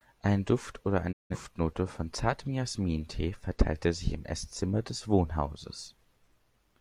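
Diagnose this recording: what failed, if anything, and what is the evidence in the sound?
Digital broadcast dropout at the receiver's decoding stage: the speech fades out within about 20 ms at 1.11 s, stays silent, and resumes at 1.36 s on "von zartem". Frames that failed reception were muted, not concealed, so there is clean silence with no smeared or repeated fill.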